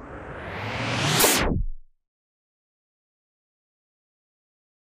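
At 1.16 s, damaged data in a compressed stream interrupts the sound for about 0.1 s, until 1.26 s. A stretch of the encoded bytes is wrong, so the decoder misreads the frames there, loses its place in the stream and has to hunt for the next valid frame header before normal decoding resumes. The result is a short glitch that does not belong to the surrounding sound.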